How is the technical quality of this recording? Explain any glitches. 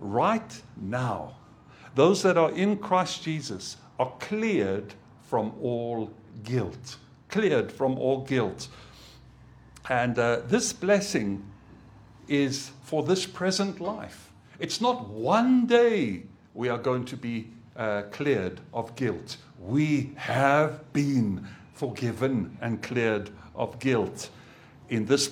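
No technical faults are audible.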